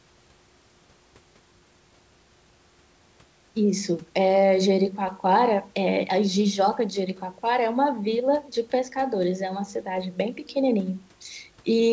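No technical faults can be heard in the speech. The audio carries nothing above 8 kHz, as expected from the wideband call codec and microphone processing, and the room noise sits about 40 dB below the speech.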